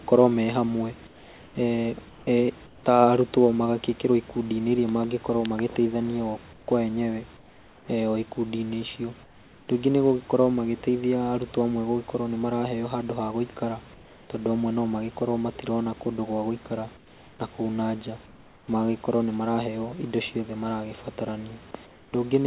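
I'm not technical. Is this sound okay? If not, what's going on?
No. In the pauses at 1.07–2.84, 6.53–7.88, 9.23–9.68, 13.94–14.3, 16.97–17.39, 18.26–18.68 and 21.86–22.13 s, there is comfort noise in place of the background. The real room sound gives way to a smooth hiss, slightly quieter in the pauses from 9.23 s on, likely because the call stops sending audio when nobody talks. Unlike a dropout, the gaps never go fully silent.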